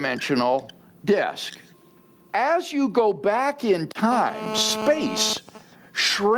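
Throughout the speech, gain pumping keeps pulling the level down on loud sounds, with a level swing of about 15 dB. The likely cause is a microphone preamp set far too high, with a fast limiter or compressor clamping down whenever the talker gets loud. Loud and quiet passages end up squashed close together. A noise gate would cut the gaps to silence.

From 4.12 s to 5.33 s, right after "you go back in", a GSM phone buzz sits about 16 dB below the speech. It is a hard, raspy 217 Hz tone with a dense stack of harmonics. A nearby 2G handset in a call transmits in bursts 217 times a second, and the audio circuitry rectifies that radio energy into sound. The buzz ignores the speech entirely. Its rate and harsh, gritty edge set it apart from the smoother 50 or 60 Hz of mains hum.

From 5.37 s to the end at 6.38 s, the steady buzz gives way to GSM signalling bursts, about 30 dB down. These are even ticks with a longer 217 Hz buzz twice a second. 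The pattern points to the same phone staying in the call while its user is silent, sending only short groups of bursts. The rhythm and the 217 Hz colour of each tick distinguish them from random clicks or crackle.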